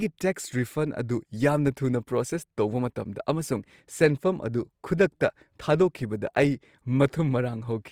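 Throughout, the speech shows plainly audible Opus compression: tones turn grainy, rough and noisy rather than swirly, though content still extends to about 20.3 kHz. This is likely Opus CELT mode filling starved bands with folded or noise energy, fitting roughly 24 kbps.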